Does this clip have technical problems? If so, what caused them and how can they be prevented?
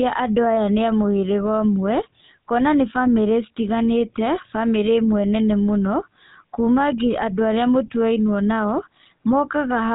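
Yes. The speech passes through the GSM full-rate codec for its whole length, and the damage is plainly audible. The codec models the vocal tract and rebuilds the excitation from a sparse grid of regular pulses, which leaves a buzzy, gravelly roughness on every voiced stretch, consistent with a 13 kbps GSM link. Nothing above 3.8 kHz survives. A plain telephone band-limit would sound muffled but smooth; here the grainy buzz is what marks GSM coding. To prevent it, record or route the call over a wideband path such as AMR-WB or a direct digital feed.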